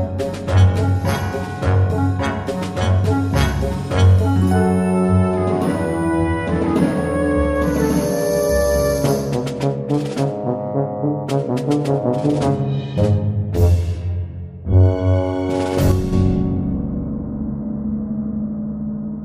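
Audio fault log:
15.91–16.13 s, one channel drops out: the level falls abruptly by about 6 dB for 0.21 s, then snaps back, likely from one stereo channel being lost before the mono sum. The waveform shows a square step down in amplitude, and the spectrogram dims evenly across all frequencies.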